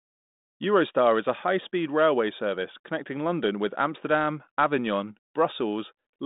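No technical faults are audible.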